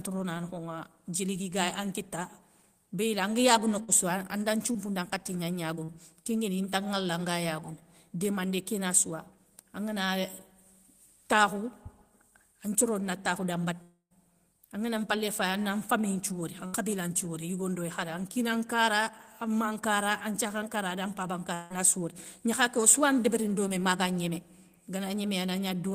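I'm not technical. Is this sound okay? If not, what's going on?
No, there are three kinds of connection fault in this speech.

A short concealed packet loss at 4.72 s, 5.84 s and 23.68 s is the smallest: a brief smear or wobble lasting only 20 to 40 ms, with barely any sound lost.

A burst of packet loss at 3.83 to 3.90 s and 16.66 to 16.74 s lasts longer. The sound is stretched into a fading buzz or hiss, then jumps ahead, skipping 40 and 60 ms.

A long network dropout at 13.82 to 14.12 s fades out and then goes fully silent for about 110 ms. At 21.54 to 21.72 s a similar fade lasts about 0.18 s. Both are likely the connection stalling, with about 0.28 s and 0.16 s lost.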